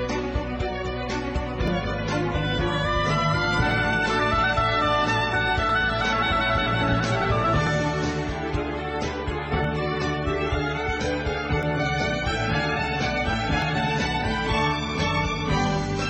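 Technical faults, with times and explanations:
1.68–1.71, 3.71–3.74, 5.69–5.72, 7.67–7.69, 9.64–9.68, 11.63–11.67 and 13.62–13.65 s: overlap between stream segments. Adjacent segments, about 2 s long, claim overlapping time stamps, so the player discards 23 to 43 ms of sound at each join, leaving a waveform jump heard as a regular click or tiny skip.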